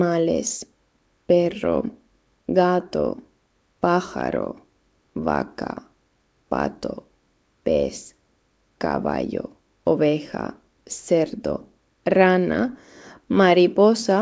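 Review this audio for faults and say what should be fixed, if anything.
No faults found here; nothing needs fixing.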